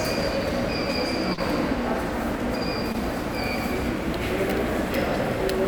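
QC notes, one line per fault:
1.33–1.39 s: short concealed packet loss. About 40 ms of audio never reached the decoder in time. The receiver filled the gap by extending the preceding sound, then blended back into the real signal. This is heard as a brief smear or wobble.
2.92–2.96 s: short concealed packet loss. Here roughly 20 ms went missing and about 18 ms was filled the same way. The repair is shorter, so it comes across as a brief smear or wobble.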